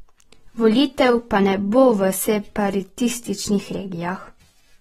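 Speech throughout sounds dull and smeared, with a warbling, fizzy texture on sibilants and nothing above 16.3 kHz. The cause is likely AAC compression: the AAC-LC coder starves bands of bits, which fits a bitrate near 38 kbps.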